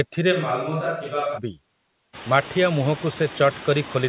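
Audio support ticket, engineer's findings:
Noise suppressor artifacts, whole clip. Background pulled down about 15 dB per frame, so noise dips in pauses and swells back under speech. Spectrogram: noise floor pumping in step with speech energy, blotchy flickering cells between syllables. Component: noise suppression stage. Mechanism: per-band gain cut on bands judged steady noise. Clearer once room noise rises about 20 dB around 2 s (still about 17 dB under speech).

Switch to a distant microphone, 0.34–1.37 s. Sound turns abruptly roomy and hollow, bass thinned, level down roughly 5 dB, room noise up to roughly 25 dB below speech. Likely cause: close mic dropped, far mic (e.g. camera) substituted. Waveform: step down in amplitude with hard edges at both ends. Spectrogram: weaker lows, reverb smear, raised floor, all band-limited at 4 kHz by the 64 kbps G.711 call path.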